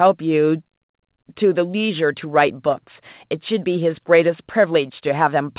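No faults heard in this speech; the band stops at 4 kHz, consistent with a narrowband call path such as G.711 mu-law at 64 kbps.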